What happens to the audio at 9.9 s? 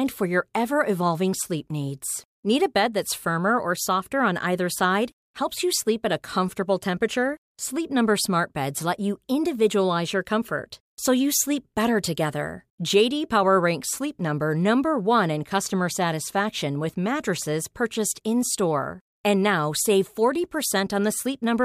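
Nothing goes wrong at 9.9 s: the speech runs on intact through that moment, with no dropout, click or distortion.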